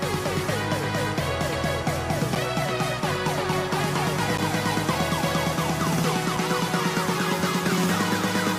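At 2.35 s and 4.37 s, gaps between stream segments, about 2 s apart, insert roughly 8 and 10 ms of hard-edged silence; the waveform shows flat dropouts, the spectrogram thin vertical blank stripes.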